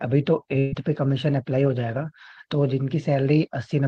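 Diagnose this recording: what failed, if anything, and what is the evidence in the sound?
Network burst of packet loss from 0.59 to 0.73 s: concealment holds the last sound and fades it, then speech resumes about 120 ms later, not falling silent like a dropout.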